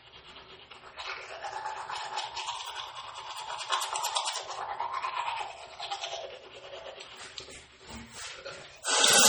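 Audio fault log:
throughout, MP3 compression: heavy watery swirl and smeared attacks as weak frequency lines flicker between frames, likely from MP3 coding at a very low bitrate near 32 kbps; nothing above 20.2 kHz.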